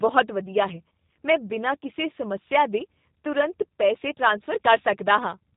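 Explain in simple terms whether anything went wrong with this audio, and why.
Something did go wrong: the whole speech clip has gone through a G.729 codec, the kind of squeeze used for internet phone calls. It rebuilds the voice from a rough model of the throat plus a few pulses every few milliseconds, rather than sending the real sound. You can plainly hear it from start to finish. Everything above about 3.8 kHz is gone, so it sounds muffled and boxy, with a slightly rough, synthetic edge to it.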